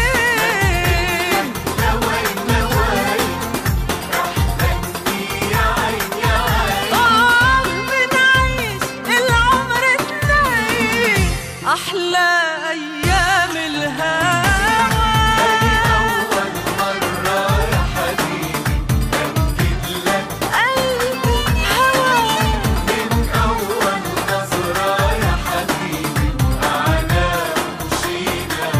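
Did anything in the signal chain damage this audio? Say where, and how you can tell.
No, nothing in the signal chain stood out as damaging this audio when I listened to it.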